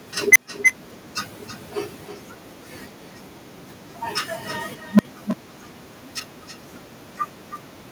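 A speech recording. Every phrase is shadowed by a thinner copy about 9 dB quieter, trailing by around a third of a second. This is echo with no canceller: the far end's loudspeaker feeds its microphone, and nothing removes the returning signal. There are two bursts from an unstable filter. At 0.32 s a tone near 2 kHz swells over 36 ms into clipping, then drops to 140 ms of silence. At 4.91 s a tone near 200 Hz builds over 83 ms and cuts to 60 ms of silence. Bad coefficients make the recursive filter's output grow until it overflows and resets.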